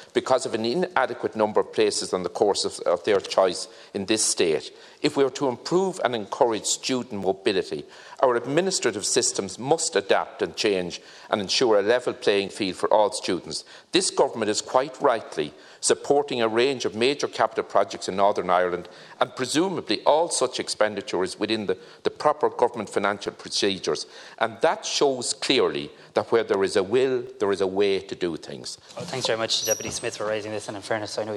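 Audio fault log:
3.23, 7.24, 11.24, 15.25, 19.26, 23.26 and 27.27 s, overlapping chunks: each new 4-second chunk starts about 7 ms before the previous one finished, so that sliver plays twice at every join. You hear it as a click or stutter in the sound, evenly spaced every four seconds.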